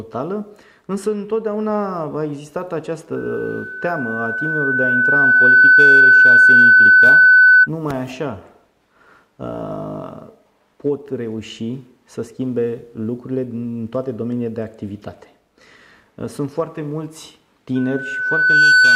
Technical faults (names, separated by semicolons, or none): loudspeaker feedback squeal